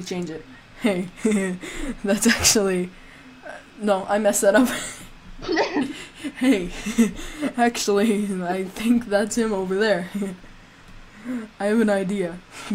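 Nothing stood out as a technical problem on listening to this clip.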